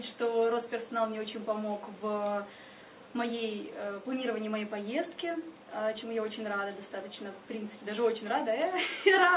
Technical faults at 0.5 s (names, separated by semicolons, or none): none